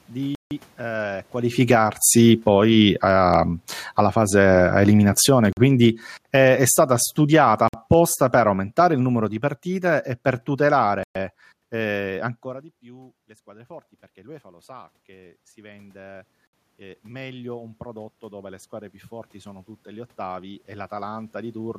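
In this speech clip, the sound drops to silence five times and then carries on: 0.35 to 0.51 s (160 ms), 5.53 to 5.57 s (45 ms), 7.68 to 7.74 s (52 ms), 11.03 to 11.15 s (121 ms, just before "eh ancora di più") and 16.47 to 16.53 s (61 ms). This is likely a Bluetooth stall, where delayed packets let the headphone buffer run empty. The level also sinks, voice and background together, from 1.48 to 3.2 s by about 8 dB, from 3.83 to 6.5 s by about 10 dB (ending before "è stata") and from 7.19 to 10.83 s by about 6 dB. That is automatic gain falling: the gain control turned down its gain after judging the input too loud or its noise too strong. Automatic gain rising lifts voice and background together by about 5 dB from 1.81 to 3.56 s and again from 4.1 to 4.66 s, overlapping the falls. From 13.44 to 21.75 s, after "ancora di più le", it climbs by about 13 dB. This follows the talker moving away around 12.5 s, when the input fell by about 23 dB, so only part of the lost level comes back.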